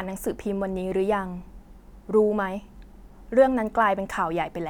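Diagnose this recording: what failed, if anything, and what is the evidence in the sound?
Nothing failed in this recording, and the sound carries no evidence of a fault at any stage.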